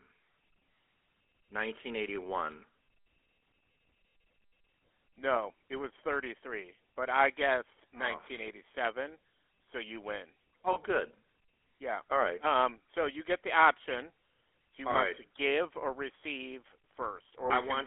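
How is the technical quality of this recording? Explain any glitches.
The recording has clear, constant codec damage and three brief dropouts.

Throughout the clip, the speech carries the GSM full-rate codec. The sound is confined to roughly 250 Hz to 3.4 kHz, so it is thin and lacks both deep bass and high detail. This codec models the vocal tract and drives it with a sparse train of regular pulses. That coarse excitation leaves a plainly audible buzzy, gravelly roughness. The rate fits a 13 kbps stream.

Lost GSM frames occur three times. The first, at 10.72 s, comes just after "so you win" and lasts about 40 ms. The second is a single 20 ms gap at 14.92 s, right before "want right to give". The third, at 17.46 s, again lasts about 40 ms. Each time, the decoder repeats the settings of the last good frame. That produces a short, rough, metallic ring in place of the missing sound.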